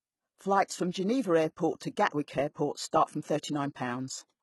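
Throughout the speech, the sibilants sound gritty and metallic, with treble that is present but synthetic and nothing above 11.8 kHz. This is likely HE-AAC compression at heavy damage, fitting a bitrate near 16 kbps. Its replicated upper band, rather than plain dullness, sets it apart from a simple low-pass cut.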